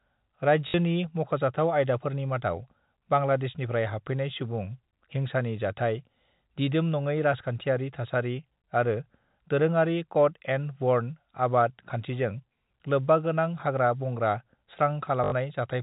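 A speech recording carried over a G.711 telephone path, band-limited to below 4 kHz, with two instances of packet loss with the last packet repeated. At 0.68 to 0.74 s, just before "मख'जाथाव आयदाफोरनि", a 60 ms gap is filled by replaying the same fragment, giving a robotic stutter. A longer 80 ms run at 15.24 to 15.32 s buzzes at about 50 Hz, which fits 20 ms packets being repeated out of step with the pitch.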